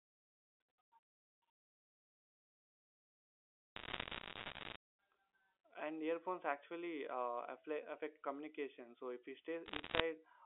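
Bit errors on a digital phone line, 3.76–4.76 s and 9.66–10.0 s: flipped bits in the mu-law stream corrupt single samples, scattering sharp ticks and crackle over the speech.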